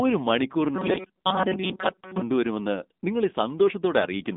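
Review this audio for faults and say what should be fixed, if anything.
AMR narrowband mobile codec, throughout: the speech is cut off above about 3.8 kHz and sounds buzzy and synthetic, pointing to a low AMR-NB mode around 8 kbps. Prevent it by routing the call over a wideband codec or a higher AMR bitrate.

Robotic sound from repeated short buffers, 0.76 to 2.22 s: a rigid metallic buzz at 188 Hz covers most of this span, likely from a roughly 5.3 ms buffer being replayed while fresh audio arrived late. Prevent it by enlarging the playback buffer or fixing the delivery timing so audio arrives without gaps.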